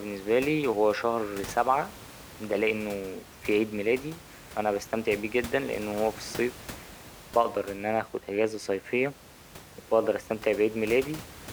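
No technical faults can be heard in this speech recording, and the room's own background noise sits about 18 dB below the speech as part of the original capture.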